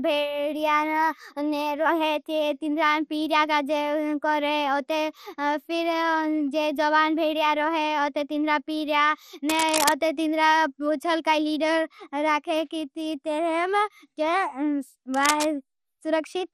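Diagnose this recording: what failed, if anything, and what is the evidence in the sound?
MP2 compression, throughout: the speech sounds dull and gurgling, with granular distortion that is plainly audible and nothing above 13.6 kHz. At the codec stage, too few bits leave upper sub-bands switched off and the rest coarsely quantised, which points to roughly 64 kbps MPEG Layer II.

Cable scratch noise, at 9.48 to 9.92 s and 15.14 to 15.45 s: brief, dense, uneven rustling bursts sit nearly as loud as the speech. In the analogue wiring, a worn cable or connector being moved likely made its contact resistance fluctuate rapidly.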